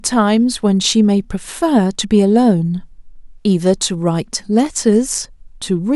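A speech recording with nothing technically wrong with it.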